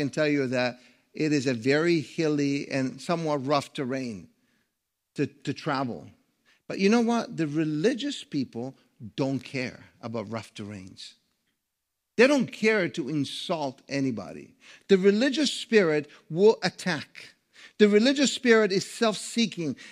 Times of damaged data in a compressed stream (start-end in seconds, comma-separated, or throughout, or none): none